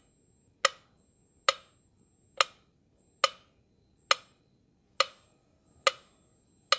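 No technical faults can be heard: the audio carries the ordinary character of a call's microphone processing, with the lowest bass taken out by its high-pass filter and nothing above 8 kHz.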